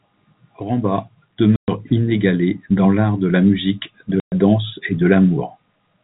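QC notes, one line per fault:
1.56–1.68 s and 4.20–4.32 s, packet loss filled with silence: the speech drops out completely for 120 ms each time, twice, and both gaps are the same length, which fits four lost 30 ms packets per gap. The receiver had nothing to play, so it dropped in dead silence, and the audio starts and stops abruptly at each edge. The band-limited telephone sound of the G.711 coding carries on as expected around both gaps.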